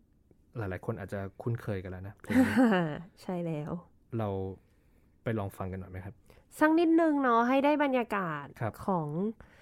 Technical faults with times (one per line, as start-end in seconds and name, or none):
none